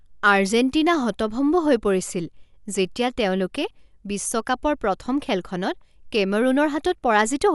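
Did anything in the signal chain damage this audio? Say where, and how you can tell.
Yes. The damage sits at the codec stage and runs through the whole speech clip. Nothing is present above 11.5 kHz, so the top end sounds dull, and a rough, fluttering noise clings to voiced tones. This is likely Dolby Digital compression at a low bitrate, consistent with about 64 kbps. The encoder narrowed the band and left many frequency lines without mantissa bits, and the decoder filled those gaps with dither noise, producing the grainy texture around the harmonics.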